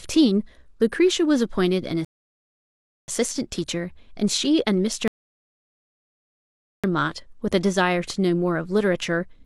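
At 2.05 s the speech halts in a rebuffering stall: the player has run out of downloaded audio and waits, adding about 1.03 s of silence before resuming at 3.08 s exactly where it broke off. A second stall follows from 5.08 to 6.84 s, adding about 1.76 s. No speech is lost. On a waveform each gap is a flat line. On a spectrogram it is a blank vertical band with sharp edges on both sides.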